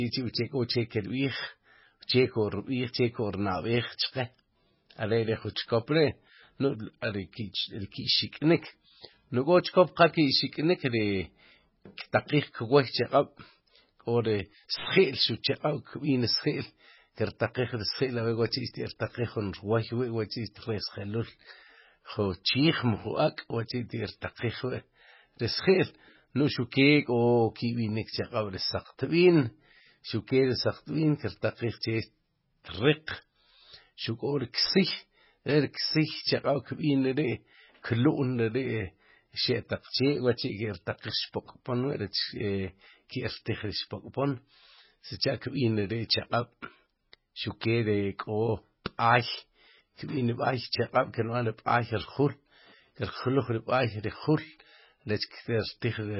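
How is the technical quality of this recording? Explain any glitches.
The technical quality is poor, with heavy damage across the whole speech clip. Throughout, nothing sounds above 5.6 kHz. Sibilants turn swirly and metallic, and consonant attacks smear. This is likely MP3 compression at a very low bitrate, around 16 kbps. Starved of bits, the encoder cuts the treble and drops weak frequency lines, which flicker on and off between frames.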